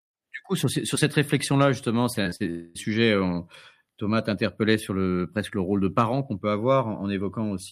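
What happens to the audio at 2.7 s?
At 2.7 s the speech is inside a gap running from 2.50 to 2.77 s, most likely a long network dropout. For roughly a quarter of a second no new audio is heard. The receiver stretches the last sound it had into a buzzy, fading fill that covers about 246 ms of the gap without dropping to silence. Speech then resumes at 2.77 s with about 240 ms of the original missing, so the sound jumps forward.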